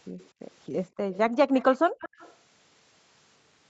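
From 0.18 to 0.29 s a faint delayed copy of the speech comes back, about 247 ms late and well below the talker. This is an echo leak. The likely cause is an echo canceller on a loudspeaker side letting some of its microphone pickup through.

From 0.9 to 1.11 s the room background drops out. This is background gated by the echo canceller. The canceller pulled the microphone down, by about 40 dB at the deepest, for roughly a fifth of a second.

As that gate releases, the echo leak returns from 1.11 to 1.18 s and again from 1.54 to 1.77 s, still 247 ms behind and quiet. From 1.99 to 2.35 s it arrives after 200 ms and is clearly louder.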